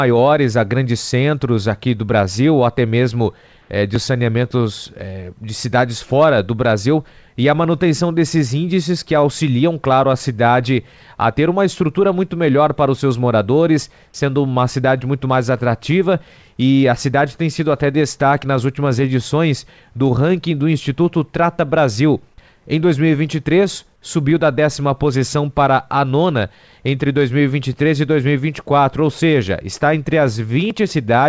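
From 3.62 to 3.70 s, about 80 ms of the quiet background, sitting about 37 dB below the loud parts, turns into flat, featureless hiss about 3 dB off its level. That's comfort noise in place of the background, likely from the sender pausing transmission while the receiver fills the gap, all within a band that stops at 8 kHz.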